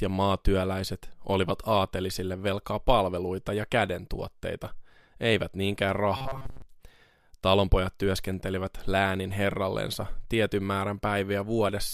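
From 6.17 to 6.62 s, right after "ja kädentuotteita eivät niinkään", the speech collapses into a rigid, metallic buzz pitched at 134 Hz that only loosely tracks the words. This is robotic sound from repeated short buffers. New audio was likely arriving too slowly, so the playback kept looping a slice of roughly 7.5 ms. Most of the stretch is repeated material while the real audio is skipped, and the fixed loop length imposes that steady pitch.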